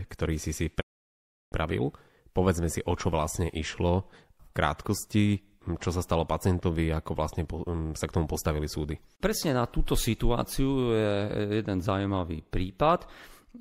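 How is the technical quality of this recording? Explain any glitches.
The recording has one clear technical fault, early on. From 0.80 s to 1.54 s there is a digital broadcast dropout: the speech fades out over roughly 20 ms and falls silent for about 0.7 s. The receiver muted because incoming frames were corrupt or missing, consistent with a run of around 22 lost frames. The speech sent during that gap is gone, and it resumes mid-programme rather than picking up where it stopped.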